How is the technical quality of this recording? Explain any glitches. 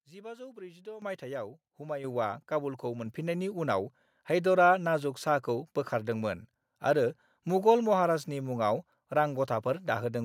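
The recording has a level fault. Microphone volume stepped up at 1.02, 2.04 and 3.06 s. The call software judged the input too quiet and raised the microphone's gain in abrupt steps of about 10, 6 and 4 dB, so the speech and background noise jump louder together each time.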